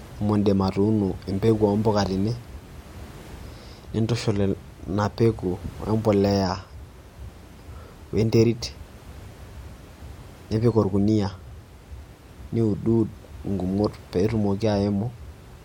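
Nothing stood out on listening to this speech; the only thing beneath it is the ordinary background noise of the room, sitting about 22 dB below the voice.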